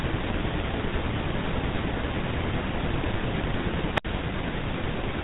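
The speech has passed through the GSM full-rate codec for its whole length. That coder keeps a coarse model of the vocal tract and excites it with a sparse, regularly spaced pulse train, discarding most of the excitation detail. The damage is plainly audible and fits a 13 kbps GSM full-rate stream. Nothing reaches above 3.8 kHz, so the speech sounds muffled and narrow, with a buzzy, gravelly roughness throughout.

From 3.94 to 4.05 s there is a wireless microphone squelch dropout. The FM radio link weakened far enough that the receiver's squelch shut the output off. You hear a short swell of hiss as the signal fades, then a gap of near silence about 67 ms long, and then the speech returns.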